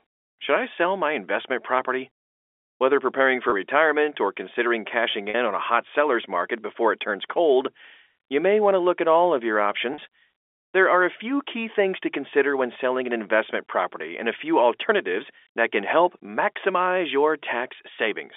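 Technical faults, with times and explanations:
3.50–3.52 s, 5.30–5.34 s and 9.94–9.98 s: packet loss with pitch repetition. Each gap is a brief held, buzzy sustain, heard before "retirement or considering cashing", before "on a hot seller's", and after "at all of your". The 20 ms gap fits one lost packet, and each 40 ms gap fits two. The receiver covered the missing audio by repeating the last pitch period on the narrow G.711 telephone line.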